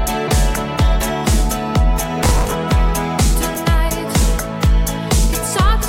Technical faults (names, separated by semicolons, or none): processor overload crackle